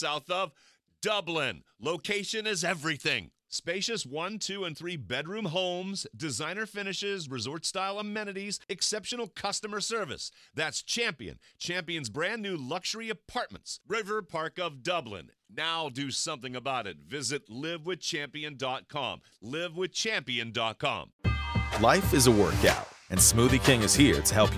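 No technical faults can be heard anywhere in the audio.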